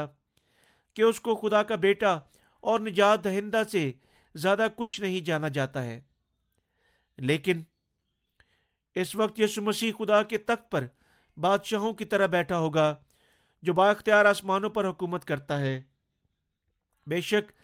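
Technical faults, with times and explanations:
4.81–4.95 s, burst of packet loss: for about 120 ms the speech stops advancing and its last sound is drawn out and faded, a held buzz or thinning hiss, because the receiver kept extending what it had while consecutive packets failed to arrive in time. Speech then resumes 120 ms further on, so that stretch is lost. Unlike a plain dropout, the gap is never silent; it is filled with a decaying continuation rather than cut to nothing.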